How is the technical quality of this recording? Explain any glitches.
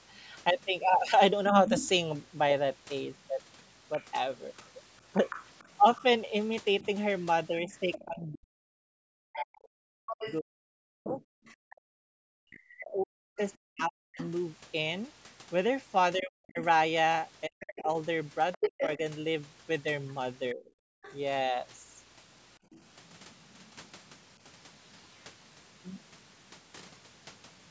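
The recording has clear echo-control problems typical of a speakerphone call, with three distinct glitches.

Other side's voice leaking through, from 1.54 to 22.76 s: a second voice sits underneath the main talker, roughly 10 dB quieter. It is likely loudspeaker playback reaching the microphone that the echo canceller failed to subtract fully, so the far end is heard faintly.

Speech suppressed in double talk, between 7.67 and 20.75 s: the main talker's voice repeatedly dips, sometimes very deeply, by around 40 dB, for about seven seconds in total. With both sides talking at once, the canceller likely could not separate near speech from echo and turned everything down.

Background gated by the echo canceller, 22.59 to 22.71 s: the room sound briefly drops by about 16 dB for roughly a tenth of a second, then returns. The canceller clamped the microphone hard while loudspeaker sound was present, then released it. 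The call's band limit, with nothing above 8 kHz, is simply part of the microphone processing.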